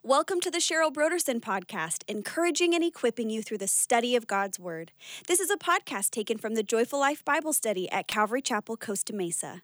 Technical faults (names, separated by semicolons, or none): electrical switching spike